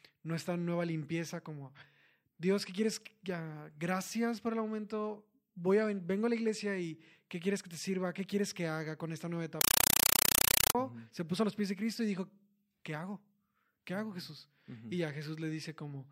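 From 9.61 s to 10.75 s, between "haga con esta nueva" and "se puso a los", the speech is replaced by harsh, very loud chattering static: a compressed stream played as audio. The link passed encoded data, consistent with an AC-3 Dolby Digital stream at around 256 kbps, straight through as PCM samples without decoding. Each frame arrives as a 5.33 ms noise burst followed by zero padding, repeating at 31.25 Hz, which gives the rapid rattling texture.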